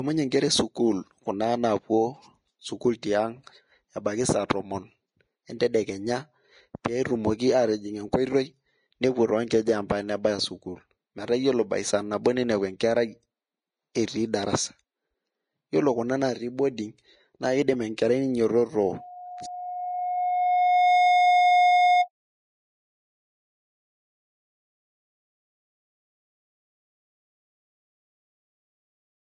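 Throughout the speech, the grainy, hissy treble and roughened tones point to Vorbis compression as the likely cause, with codec damage plainly audible. The residue above the smooth spectral floor has been quantised so coarsely that fine detail has turned into noise-like texture, which fits a bitrate around 22 kbps. On a spectrogram, the energy stops at a flat ceiling near 10.6 kHz, and the upper bands look speckled and patchy rather than continuous.

At 12.24 s a pre-echo appears. A sharp attack landed late in a transform block, so quantisation noise scaled for the loud onset also filled the quiet moment just before it. A brief hiss of about 13 ms runs ahead of the attack, which sounds smeared rather than crisp. A spectrogram shows a thin, broadband smudge just ahead of the onset. The waveform shows low-level fuzz where there should be near-silence before the jump.

From 18.86 s to 22.1 s there is a loudspeaker feedback squeal. 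The microphone picked up the loudspeaker it was feeding, and at 719 Hz the loop gain exceeded one, so that tone kept growing. It swells over roughly two seconds into a steady squeal that ends up about 5 dB above the speech. A spectrogram shows a single bright horizontal line at 719 Hz thickening over time. The waveform shows a growing sinusoidal envelope overriding the speech.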